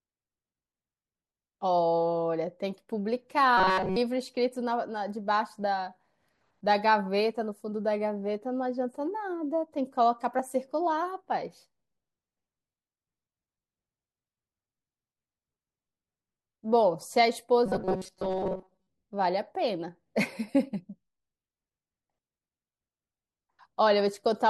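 From 3.57 to 3.96 s, and again from 17.66 to 18.89 s, the speech turns into robotic sound from repeated short buffers: a rigid, metallic buzz fixed at 188 Hz, with most of the sound replaced by repeats. This was likely caused by audio arriving too seldom, so a piece about 5 ms long was replayed to fill the time. Unlike a stutter or dropout, it is a steady buzz that loosely follows the words.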